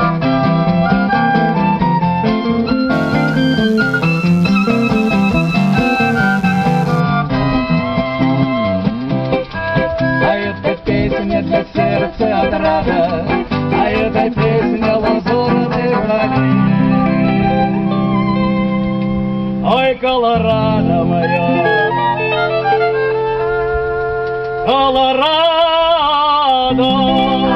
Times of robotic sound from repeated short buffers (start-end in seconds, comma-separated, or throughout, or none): none